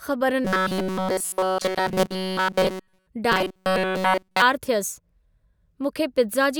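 Audio likely arrived too seldom, so tiny buffers looped. This caused robotic sound from 0.45 to 3.07 s and 3.32 to 4.42 s: a rigid metallic 188 Hz buzz.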